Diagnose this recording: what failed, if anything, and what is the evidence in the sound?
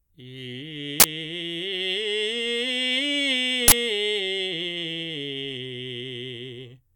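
The music gets hit twice by an uninitialised buffer, which puts this at the driver or buffer stage. There's a sharp, loud blast of digital noise from 1.00 to 1.04 s and another from 3.68 to 3.72 s, each 40 ms long, which fits one buffer's worth of audio. What's happening is that a block got handed to playback before anything was written into it, so whatever junk was sitting in that memory came out as samples.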